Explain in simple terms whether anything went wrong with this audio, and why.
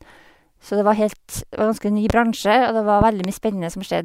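Yes, something went wrong: there are loud pops on top of the speech. The first is a single sharp pop from 2.10 to 2.12 s, and the second is a pair of pops in quick succession between 3.01 and 3.27 s. Both jump well above the level of the talking, which carries on underneath. The likely cause is a sudden electrical jolt, like a plug, switch or static discharge, briefly kicking the signal.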